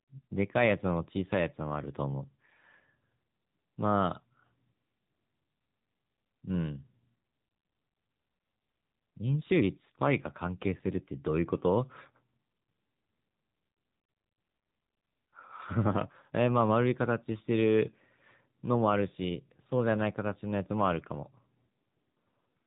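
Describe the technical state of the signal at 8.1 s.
At 8.1 s the speech is carrying AMR narrowband mobile codec damage, present for the whole clip. The codec rebuilds the voice from a vocal-tract model excited by a few pulses per 5 ms subframe, so nothing above 3.8 kHz survives, and the plainly audible buzzy, synthetic grain fits a low mode of about 7.4 kbps. A simple low-pass filter would only dull the sound, while this codec also makes the voice coarse and artificial.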